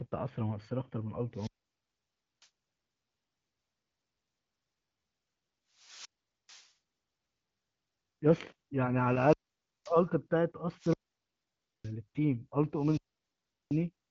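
In this speech clip, the radio link of an analogue wireless microphone repeatedly fades far enough that the receiver's squelch shuts the output, a wireless microphone squelch dropout. Each time, hiss swells, the sound cuts to near silence, then returns: at 1.32 to 2.49 s (mute about 0.95 s), 5.75 to 6.71 s (0.44 s), 9.05 to 10.06 s (0.53 s), 10.77 to 11.94 s (0.91 s) and 12.73 to 13.85 s (0.74 s). The HD Voice path carries the speech cleanly, with nothing above about 7.5 kHz.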